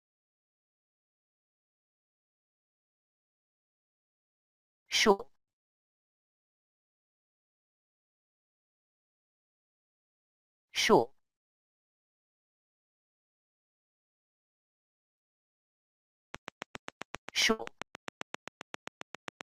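At 5.11 s there is a burst of packet loss lasting about 0.11 s. A run of audio arrived too late or not at all, so the receiver extended the last sound for 80 ms, fading it out as a held, decaying tail. Playback then resumes with 80 ms of material skipped, which produces an abrupt jump in the sound.

From 16.35 s to the end of the clip, a train of clicks runs at a steady 7.5 per second. The pulses are evenly spaced and alike in shape, peaking well above the level of the sound. They come through as a regular ticking laid over everything, including the quieter stretches. A repeating pulse like this is likely interference from nearby equipment or a faulty connection or power supply.

A second burst of packet loss occurs at 17.51 s, in the middle of the clicking. It follows the same pattern as the first: 80 ms of concealment holds and fades the preceding sound, then 80 ms of audio is skipped before playback picks up again.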